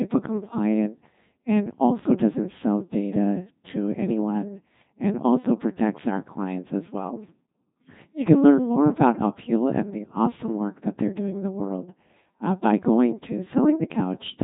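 A Codec 2 vocoder runs through the whole speech clip, which fits its 2.4 kbit/s mode: only pitch, voicing, energy and a spectral envelope survive, and the decoder rebuilds everything from sine waves, leaving heavily robotic, buzzy speech with nothing above 3.8 kHz.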